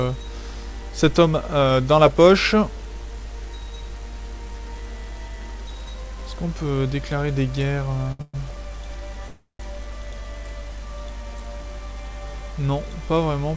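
At 8.12 s a packet failed to arrive on time and the jitter buffer ran dry. This is a short stall from a late packet: the receiver held the last sound for about 74 ms, to 8.21 s, and picked up where it had stopped. The sound stretches with a faint buzzy sustain. Nothing is lost; the playback simply slips 74 ms later.

Right after, from 8.21 to 8.36 s, comes a call audio freeze, likely from packets held up in transit. The buffer emptied again, so the receiver kept extending the last sound for about 122 ms, fading it into a brief 20 ms silence before the audio resumes intact. A longer freeze follows from 9.28 to 9.61 s, about 312 ms. The filled sound decays into roughly 130 ms of silence before the audio continues, now further delayed. Throughout, the call codec leaves nothing above 8 kHz.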